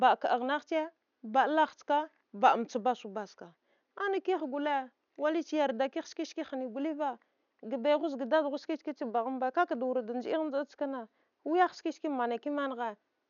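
Speech recording with no technical faults to report.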